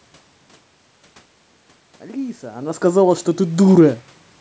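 Speech here, and the one real problem is automatic gain rising from 2.0 to 3.73 s. The level at the microphone drops by about 14 dB, partly because the talker seems to back off around two and a half seconds. The gain control then slowly pushes its gain up by about 4 dB to compensate, so the voice and the room noise swell together over that stretch rather than the level recovering cleanly.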